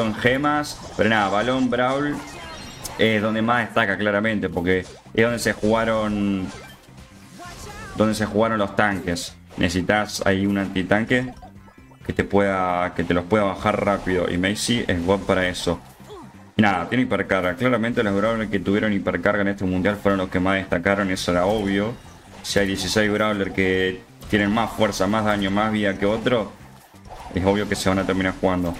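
Nothing stood out as a fault anywhere in the recording on listening.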